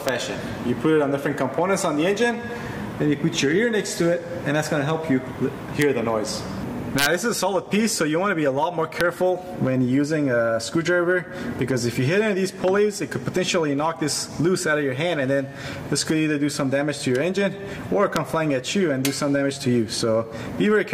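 You get sharp integer overflow cracks at 0.09, 5.82, 6.99 to 7.06, 9.01, 18.16 and 19.05 s, where peaks went up to about 2 dB over full scale and wrapped to the opposite sign. From 14.92 to 16.19 s there's also a steady, raspy GSM phone buzz at 217 Hz, about 32 dB below the sound, from a nearby 2G phone on a call.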